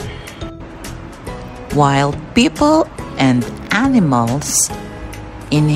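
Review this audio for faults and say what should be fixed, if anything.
No faults turn up in this audio, so nothing needs to be fixed.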